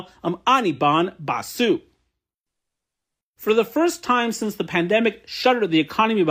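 Listening to this speech recording, nothing technical stood out.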